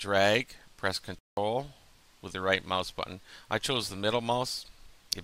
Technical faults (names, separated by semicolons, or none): corrupt frame muted